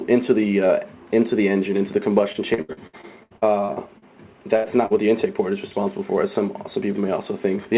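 From 2.32 to 4.04 s the audio suffers repeated packet loss, giving it a choppy, robotic character. Over that stretch packets go missing or arrive too late a dozen times, and each hole is patched by extending the preceding sound before the next one follows. About half a second of real audio is lost, with roughly 28% of the span made up of substituted material. The longest single gap is 74 ms. The repeated short extrapolations give the sound a stuttering quality with fragments dropped out.

At 4.56 to 4.66 s there is a burst of packet loss. Several consecutive packets fail to arrive in time, removing about 80 ms of audio. The receiver fills the hole by continuing the last sound and fading it down across the gap, so it comes across as a held, decaying tone or hiss. Playback then resumes further along, and the content that fell inside the gap is skipped.

At 4.86 to 4.92 s a short concealed packet loss occurs. 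About 40 ms never reaches the decoder, and the receiver bridges it with a brief synthetic continuation before blending back into the real signal. This is heard as a quick smear or wobble rather than a clear dropout. All of this sits on the call path's narrowband sound, which has nothing above 4 kHz, consistent with G.711 μ-law at 64 kbps.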